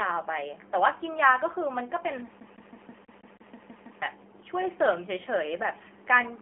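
Speech carrying AMR narrowband mobile codec damage throughout: nothing above 3.6 kHz, and a buzzy, synthetic texture that a plain telephone filter wouldn't add, fitting a low bitrate around 7.4 kbps.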